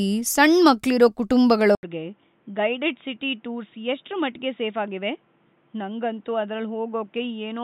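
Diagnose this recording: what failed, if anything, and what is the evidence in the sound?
At the driver level, the input likely switched to a poorer device at 1.75 s. After an 80 ms silence, the speech turns boxy, with a narrower band, and drops about 10 dB.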